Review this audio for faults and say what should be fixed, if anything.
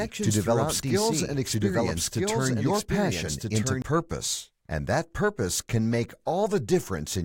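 From the start to 3.82 s, a doubled audio track runs under the speech: a second, full-band copy trails the original by about one and a half seconds, roughly 5 dB quieter, with no reverberant tail or room colouring. It is already present when the clip opens and drops out abruptly at 3.82 s. The likely cause is the same feed reaching the mix twice, once through a slower capture path, or an edit leaving an offset duplicate. To prevent it, route each source to the mix only once and check edited regions for leftover overlapping copies.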